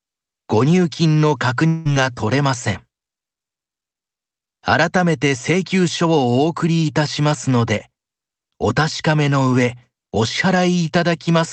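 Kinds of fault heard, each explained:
Long network dropout: from 1.67 to 1.87 s, about 0.18 s of speech goes missing, and nearly all of that gap is filled with the receiver's continuation of the last sound, a smeared buzzy tone that decays rather than dropping to silence. The likely cause is a run of lost packets: the receiver keeps synthesising from the last good audio until real audio resumes, and the lost stretch is never recovered. The surrounding call audio carries codec coloration and stops near 8 kHz.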